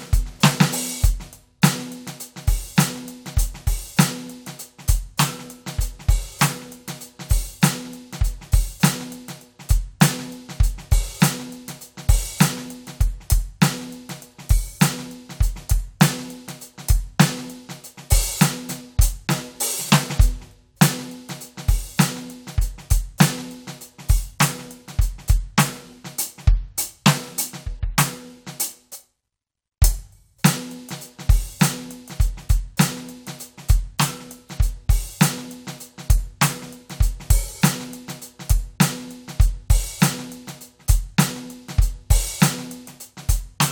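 No technical faults are audible in this music.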